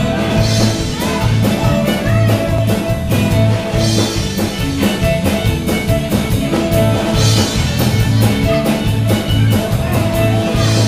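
At 2.58 s there's a skip where audio goes missing between chunks: a brief piece, roughly 20 ms, simply drops out and the two sides butt together. That's likely the recorder losing a slice while closing one 4 s chunk and opening the next.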